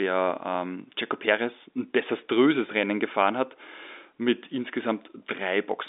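Nothing here trips any alarms: the speech comes across as a typical landline telephone call with its narrow band of roughly 250 Hz to 3.6 kHz, and there's no fault to point to anywhere in it.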